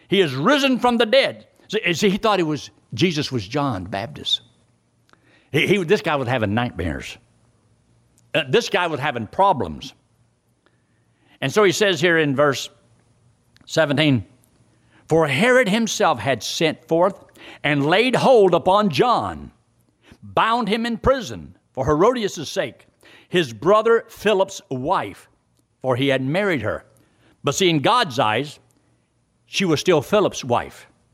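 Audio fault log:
throughout, gain pumping: the gain ducks by about 5 dB under each loud syllable, squashing the speech's dynamics. This is likely from input gain set far too high with a fast limiter pulling it down.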